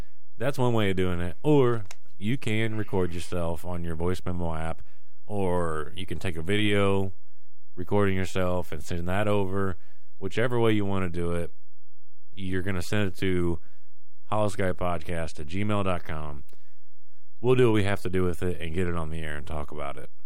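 DC offset runs through the whole speech clip: the waveform sits shifted off zero by a constant of about -23 dBFS. You can't hear it directly, but it eats into headroom on one side and shows up as steady energy at 0 Hz.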